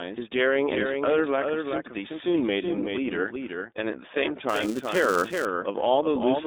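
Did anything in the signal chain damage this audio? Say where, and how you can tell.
Yes. A doubled audio track runs throughout: a clean copy trails about 400 ms behind, roughly 5 dB quieter, with no decay or room colour, unlike reverb. A second capture path is the likely cause.

The codec stage shows iLBC damage throughout: the line band is 250 Hz to 3.7 kHz, nothing passes above 4 kHz, and a rough, synthetic texture marks frame-based excitation coding rather than simple band-limiting.

In processing, a filter restarted on every block from 4.49 to 5.45 s. It produces a 345 Hz buzz that tracks signal level, unlike steady mains hum, and fits a 128-sample block.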